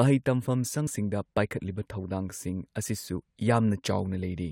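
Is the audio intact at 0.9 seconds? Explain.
No. Compressed frames skipped at 0.86 s, just before the moment asked about. About two whole frames never reached playback, so the speech jumps ahead by roughly 40 ms, which fits frames of about 21 ms. The join is heard as a sudden jump in the speech.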